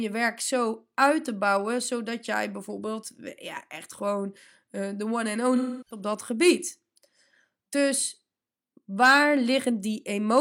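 From 5.56 to 6.01 s the speech turns smeared and phasey, which fits AAC frame loss with concealment: roughly 0.3 s of audio, about seven frames, went missing, and the decoder rebuilt it from the last good spectrum. Unlike a plain dropout, the gap is papered over rather than left silent.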